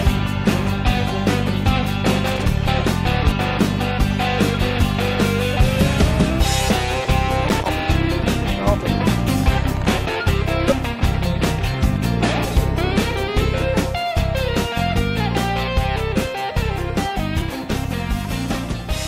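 A loose connector crackle comes first, from 2.26 to 2.48 s: a worn or dirty contact keeps making and breaking, chopping the signal, so the sound turns into a ragged burst of scratchy crackle. At 3.31 s, compressed frames are skipped: missing or rejected frames drop roughly 70 ms of audio, and the sound jumps ahead by that much. The connector crackles again from 7.48 to 7.69 s with the same irregular scratching. Frames are skipped again from 10.69 to 10.73 s, where about 40 ms of audio is lost in another jump ahead.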